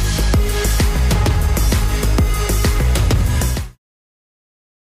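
No technical faults can be heard in this audio.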